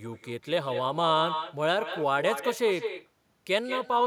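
Speech with echo with no canceller throughout: the far-end loudspeaker feeds its microphone, so a thinner copy returns about 9 dB down, roughly a fifth of a second later, showing as weaker, delayed duplicate spectrogram streaks.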